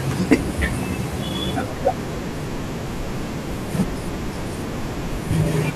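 A stage in the signal chain was driven about 6 dB beyond what it could pass between 0.31 and 0.34 s of this speech clip, so the waveform's peaks were sliced flat at the ceiling. That is hard clipping. The squared-off tops add harmonics well up into the high kHz range, which arrive as a brief harsh crackle over the speech during that 30 ms stretch, before the level drops back under the limit.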